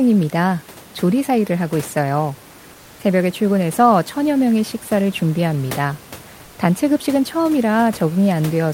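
At 2.73 s the room background drops out for about 0.26 s. Comfort noise replaces it, a smooth, featureless hiss about 1 dB quieter. It recurs at 6.45 s for 0.12 s, about 2 dB quieter. Likely cause: discontinuous transmission muting the sender during pauses.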